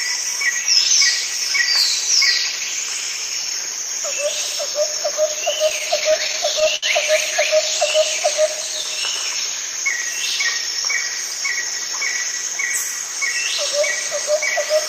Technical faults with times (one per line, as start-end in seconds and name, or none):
5.69-6.84 repeated stalls (stutter)